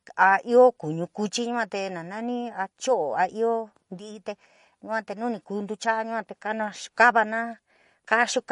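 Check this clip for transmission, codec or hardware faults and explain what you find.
There's one fault, and it runs through the whole speech clip. It sounds like MP3 compression, likely from a starved encoder: nothing survives above 10.6 kHz, and sibilants turn watery and swirly, which fits a bitrate around 40 kbps.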